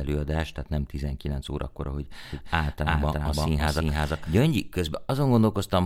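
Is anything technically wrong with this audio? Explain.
Yes. From 2.3 s to 4.4 s, just after "órakor ahogy", there is a doubled audio track. The speech was likely captured a second time through a slower path, or an edit left two copies out of step, so a second full-band copy runs about 0.3 s behind the first at roughly equal loudness. The result is a dry, slapback-like repeat with no room decay, switching on and off abruptly at those edges.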